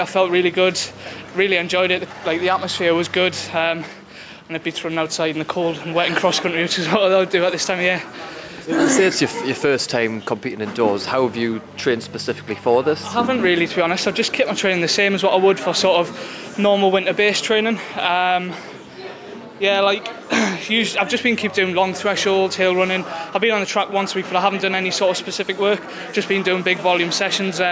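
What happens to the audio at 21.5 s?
At 21.5 s, as throughout the clip, there is gain pumping. The gain swings by roughly 5 dB, pulled down on every loud sound, likely from gain set far too high with a fast limiter. A noise gate would instead cut the background to silence.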